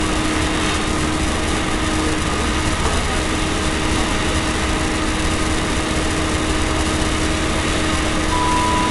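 Throughout, nothing sounds above 11.2 kHz, with smeared, swirly MP3 artefacts that the file's high bitrate cannot explain. This is likely low-bitrate audio saved at a high bitrate: a 47 kbit/s-class encoding passed through again, unlike a plain low-pass.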